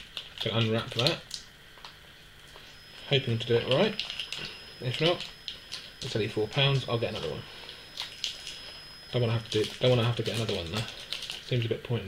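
A thin, steady whistle at 5.1 kHz sits behind the audio from 2.64 s to 11.43 s, swelling and fading slowly in level and staying roughly 25 dB under the main sound. This feedback whistle is likely a loudspeaker-to-microphone loop held just short of runaway, sustaining that single tone.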